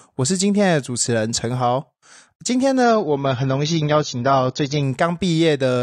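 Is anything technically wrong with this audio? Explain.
Yes. From 2.83 to 4.83 s this speech clip shows an adaptive stream at a lower bitrate. When the connection slowed, the player switched to a leaner encoding of the same audio, and the sound points to a step from roughly 96 kbit/s down to 24 kbit/s AAC. With so few bits, the encoder discards everything above 6.9 kHz, so the treble abruptly dulls and thins, then returns without any gap when the stream recovers.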